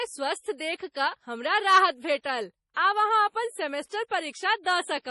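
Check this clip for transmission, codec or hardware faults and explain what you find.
One fault shows up, MP3 compression: the whole speech recording sounds heavily squeezed, with nothing above 11.5 kHz and a watery, swirly texture. Starved of bits, likely at around 32 kbps, the encoder chops the treble and drops weak detail frame by frame.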